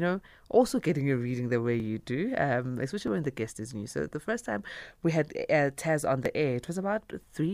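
At 1.8 s, between "your reading the way" and "do um", then at 3.08 s before "when the guest is", and at 6.26 s, the speech jumps ahead by a few milliseconds with no silent gap, likely a dropped buffer (overrun) where unread samples were overwritten, unlike a dropout, which leaves a gap.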